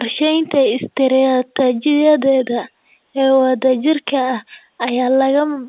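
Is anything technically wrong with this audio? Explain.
No, nothing's actually wrong here: the speech just carries the usual G.711 telephone character from its A-law coding at 8,000 samples a second, so there's nothing above 4 kHz and a faint noise rides along with the level, which is exactly how a phone line should sound.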